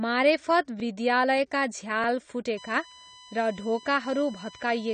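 Speech recording with a dull, smeared quality throughout, nothing above 9 kHz and plainly audible warbling, likely from AAC compression at a low bitrate around 32 kbps. At 0.80 to 0.82 s a repeated buffer makes one short piece play twice with a hard join, heard as a brief stutter that fits a 20 ms buffer. From 2.57 s to the end a steady USB whine sits about 20 dB below the speech, pitched at 1 kHz with its strongest component at 3 kHz, from bus frame current leaking in through power or ground.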